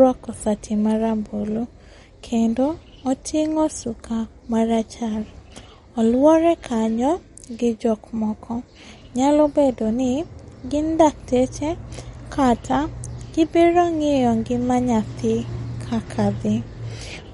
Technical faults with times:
0.00-17.33 MP3 compression

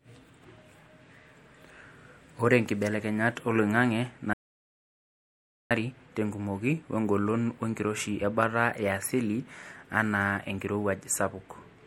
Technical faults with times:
0.00-11.87 MP3 compression
4.33-5.71 audio dropout to silence

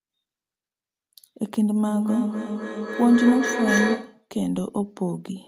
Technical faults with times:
1.88-4.29 feedback echo between two devices

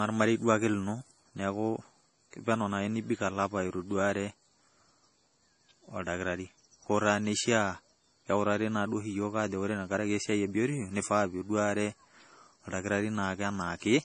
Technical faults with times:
0.00-14.04 MP3 compression

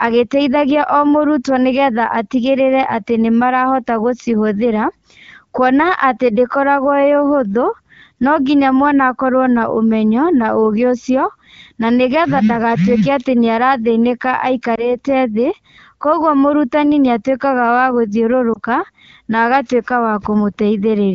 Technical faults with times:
14.75-14.98 lost AMR speech frames
18.53-18.59 lost AMR speech frames

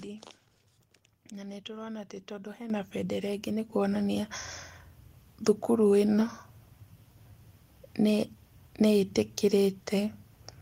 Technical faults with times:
2.70 microphone volume stepped up
3.72 microphone volume stepped up

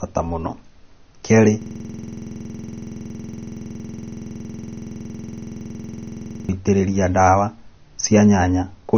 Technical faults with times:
0.00-8.97 low-bitrate audio saved at a high bitrate
1.62-6.49 system hang loop

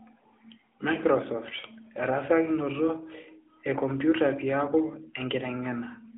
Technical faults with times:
0.00-6.17 AMR narrowband mobile codec

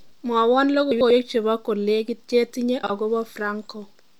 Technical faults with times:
0.91-1.11 frames out of order
2.83-2.90 frames out of order

